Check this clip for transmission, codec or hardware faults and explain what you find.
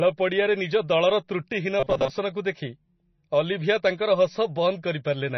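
Two faults are audible in this speech clip: heavy codec damage throughout and a short robotic stretch.

Throughout, MP3 compression is likely responsible for the dull, watery quality. Weak spectral detail flickers between frames, which fits a low bitrate of around 26 kbps starving the encoder.

From 1.80 to 2.10 s the sound turns into a rigid, metallic buzz at 133 Hz: robotic sound from repeated short buffers. A repeated fragment about 7.5 ms long is the likely cause, with roughly half the real audio skipped.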